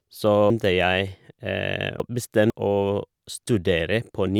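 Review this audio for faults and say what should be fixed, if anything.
Between 0.5 and 2.5 s the speech has chunks out of order. A 500 ms chunk that belongs at 0.5 s plays three chunks late, at 2.0 s, leaving hard joins at 0.5, 2.0 and 2.5 s. Unlike a dropout, nothing is missing, only misplaced. Reorder buffers by sequence number before playback or writing.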